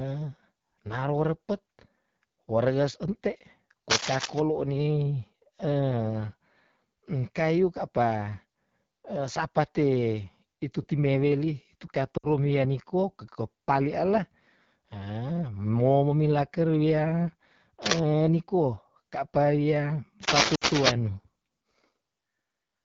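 Throughout, the speech has a rough, raspy grain, with the top of the band sounding hissy rather than detailed. That is the AMR wideband (HD Voice) codec at one of its lowest modes, which fits about 8.85 kbit/s. The encoder models speech up to 6.4 kHz with a pulse-excited vocal tract filter and fills the 6.4 to 7 kHz band with shaped noise. At this rate there are too few bits for a clean excitation.

From 3.9 to 4.4 s, a burst of dense, uneven scratching rides over the speech, somewhat louder than the speech itself. It returns briefly from 17.83 to 18.0 s and again, longer, from 20.2 to 20.92 s. This cable scratch noise is likely from a worn cable or connector being moved, so that its contact resistance jumps about rapidly and injects crackly noise into the signal.

At 12.18 to 12.27 s, the speech drops to near silence for about 60 ms before recovering rough and weak. The same happens at 20.55 to 20.64 s, inside the last scratch burst. 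These are lost AMR speech frames, and the length fits three 20 ms frames. Failed frames were replaced by the decoder repeating its last good pitch and vocal tract settings at falling gain, which produces the brief fade before normal decoding resumes.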